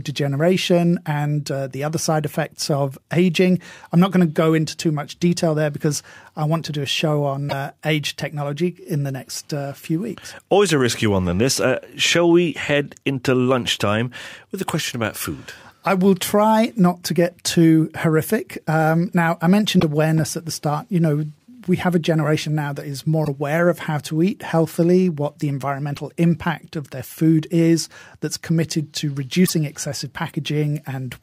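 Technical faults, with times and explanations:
7.46, 19.76, 23.21, 25.93 and 29.45 s: damaged data in a compressed stream. Short glitches of about 40 to 70 ms each, one right after "generation now that is". Corrupted frames throw the decoder off, so it garbles them while hunting for the next valid header.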